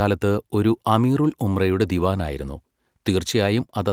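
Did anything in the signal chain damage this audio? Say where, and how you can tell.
No. Nothing in the signal chain damaged this audio.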